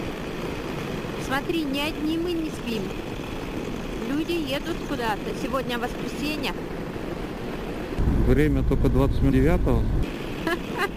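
A fine hiss and roughness rides on the audio for its whole length, thickening on loud passages and on bright, high-frequency content and dropping away whenever the sound goes quiet. That behaviour points to sample clock jitter: the converter's clock wanders by something on the order of 10 microseconds, so each sample is captured a little early or late. Steep parts of the waveform change most in that time, so the error follows level and treble, sitting at roughly 25 dB below the signal. Two brief glitches break in on top of this. There is a short blip at 4.27 s, and a longer one from 9.29 to 9.33 s. Both sound like damaged data in a compressed stream. Corrupted bytes made the decoder misread those frames and lose sync until it locked onto the next valid frame header.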